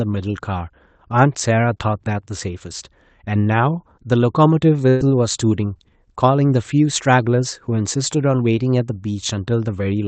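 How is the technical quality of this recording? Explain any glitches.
The recording has one glitch, heard through a call codec that limits the sound to about 8 kHz, which fits Opus at around 24 kbps. From 4.89 to 5.02 s there is a burst of packet loss. About 120 ms of speech went missing. The receiver stretched and faded the last sound for about 110 ms, so it blurs, then jumps ahead.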